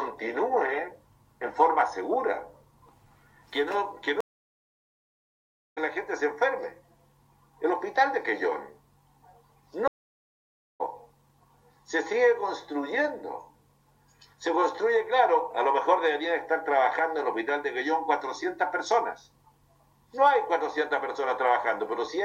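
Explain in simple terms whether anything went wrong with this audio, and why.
Yes, two stream reconnects. The connection dropped, leaving silence from 4.21 to 5.79 s and again from 9.88 to 10.81 s. Each time the player reconnected and restarted decoding mid-stream, so the sound picks up roughly a second further on, skipping that bit.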